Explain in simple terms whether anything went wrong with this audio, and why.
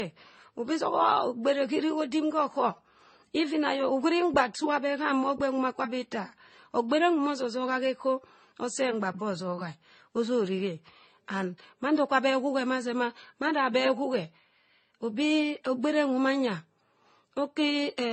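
Something did go wrong, across the whole clip. The speech sounds dull, with nothing above 8.3 kHz. Different compression artefacts are layered together. This likely comes from transcoding between lossy codecs. The audio was squeezed by one codec, then squeezed again by another, and the damage added up.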